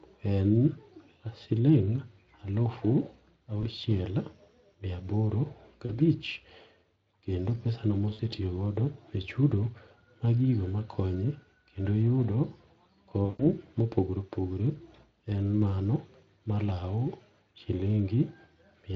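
Four brief patches where the speech smears into a buzzy, held tone or a coloured noise that sinks in level, at 3.61 to 3.64 s, 5.85 to 5.91 s, 8.13 to 8.21 s and, longest, 13.25 to 13.47 s. This is VoIP packet loss concealed by the speech codec: with runs of roughly 20, 40, 60 and 140 ms missing, the Speex decoder, whose light coding fits a rate near 24 kbps, kept repeating its last pitch and filter at falling gain until packets resumed.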